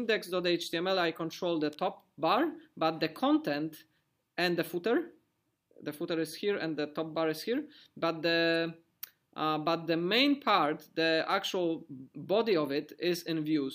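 At 1.73 s a single electrical switching spike sounds as a sharp snap laid over the audio. It peaks at roughly -30 dBFS. The likely cause is a nearby switch, motor or static discharge arcing briefly, with the audio line picking up the burst.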